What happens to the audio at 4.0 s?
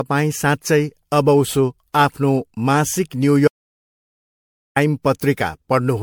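At 4.0 s the sound is gone completely. This is an audio dropout to silence, running from 3.48 s to 4.76 s, so about 1.28 s is lost. The gap is silent. No room tone or hiss remains. The input was likely lost, through a disconnect or a mute, while the recorder kept writing silence. The sound stops abruptly and then resumes mid-flow. Whatever was said inside the gap is missing.

The audio on either side of that gap also carries generation loss. The speech sounds swirly, hollow and smeared, and consonant attacks are blurred. The damage is heavier than a single pass at its bitrate would cause. It likely comes from repeated MP3 decoding and re-encoding, about seven passes, consistent with a 96 kbit/s chain. Each pass quantises on a shifted frame grid, so noise and spectral holes pile up.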